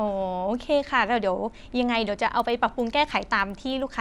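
From 2.3 s to the end, the speech carries a resampler restarted on every block. Each 100 ms block was converted separately, which fits a 24 kHz to 48 kHz conversion. Block edges lack true neighbours. Faint ticks repeat at 10 Hz, only under speech.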